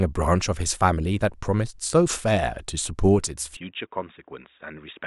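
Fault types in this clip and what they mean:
Input switched to a poorer device: from about 3.57 s the speech suddenly goes dull and boxy, with nothing above 3.8 kHz, drops about 10 dB in level, and picks up a faint new noise floor well below it, with no gap, likely a jump to a narrower-band microphone.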